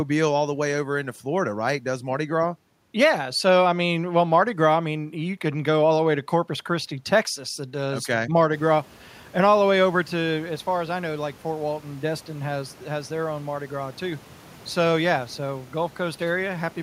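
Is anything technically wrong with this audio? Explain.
No, nothing in the system is at fault; the background room noise that rises by about 17 dB a little past 8 s belongs to the recording space, and it stays about 28 dB below the speech.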